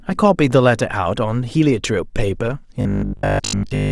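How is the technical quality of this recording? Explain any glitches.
The recording has one clear glitch. From 2.81 s to the end of the clip, the speech collapses into robotic sound from repeated short buffers: a rigid, metallic buzz at 50 Hz that loosely tracks the speech. This is likely audio arriving too slowly, so the playback side keeps looping the last block of about 20 ms, which fits a 50 Hz repetition, while fresh audio is dropped. Most of that final stretch is repeated material rather than new sound.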